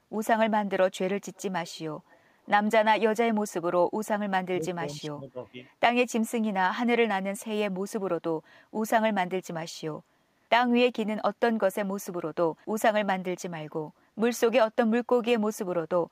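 At 1.35 to 1.42 s and again at 2.1 to 2.18 s, brief scraps of echo leak surface: a faint copy of the voice returning 433 ms behind the original, roughly 30 to 35 dB down. The likely cause is a loudspeaker-side echo canceller letting residual pickup slip back. On a spectrogram these show as weak repeats of earlier speech harmonics, and on the waveform as small ripples.

From 3.28 to 3.96 s and 4.49 to 5.57 s, the talker is pulled down while the far side speaks. This is speech suppressed in double talk, likely an echo canceller unable to separate near speech from loudspeaker echo and gating both. The first stretch loses about half a second of level, dropping by as much as about 30 dB. The second loses around 0.7 s, up to about 20 dB. The waveform envelope caves in, and spectrogram energy drops.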